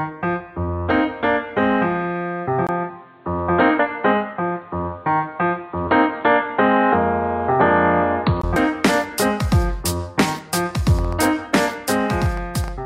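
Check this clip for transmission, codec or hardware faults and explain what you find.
Three kinds of fault are audible: an input switched to a poorer device, two places where compressed frames are skipped, and a train of clicks near the end.

From 2.67 s to 8.44 s the sound turns dull and boxy, with nothing above 4.5 kHz, a new noise floor roughly 35 dB below the signal, and a 20 ms gap at the switch. The likely cause is the input moving to a narrower-band device, such as a headset's call profile, and then back. The loudness barely changes. Because the dullness begins and ends abruptly, with a gap and a different hiss, this points to a device change rather than a gradual filtering effect.

At 3.79 s and 8.56 s the audio jumps forward, by roughly 0.2 s at the first point and roughly a tenth of a second at the second. Each jump fits a whole number of 32 ms compressed frames that were missing or rejected by the decoder. 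The lost stretch of sound separates these skips from a simple dropout or a click.

From 10.24 s to 12.69 s there are about 15 similar pops at roughly 5 per second, unevenly spaced, peaking about 5 dB above the sound. They continue through pauses, so they sit on top of the audio rather than replacing any of it, unlike the frame skips. Interference or a faulty connection is the likely source.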